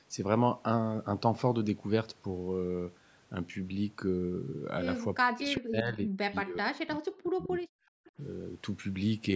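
Speech recorded through a call path, band-limited to nothing above 8 kHz, with three echo-canceller faults in the last four seconds. From 5.22 to 7.51 s the talker's level falls sharply, by about 40 dB at its deepest, across roughly two seconds in total. This is likely speech suppressed in double talk: with both ends talking at once, the canceller could not tell the near talker from loudspeaker echo and attenuated both. From 7.79 to 8.12 s the room sound underneath drops out for about a third of a second, down by about 40 dB, then returns. That is background gated by the echo canceller, which clamped the microphone while the far-end loudspeaker was active and released it once playback stopped. Inside that gate, from 8.06 to 8.11 s, a short, faint scrap of delayed voice appears, around 30 dB below the speech and trailing the original by 382 ms. This is likely an echo leak, where residual loudspeaker pickup passed through the canceller and was sent back along the call.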